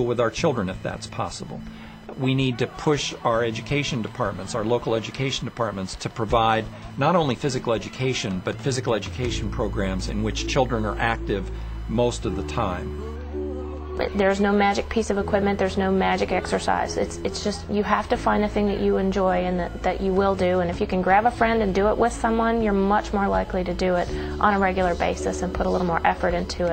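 From start to finish, computer activity noise rides underneath the sound: a thin buzzing chirp pulsing at around 1 kHz, sitting roughly 30 dB below the signal. Shifting processor, graphics or mouse load is pulling on the ground shared with the audio circuit, so the interference tracks what the computer is doing rather than anything in the sound, flickering and scratching independently of the programme material.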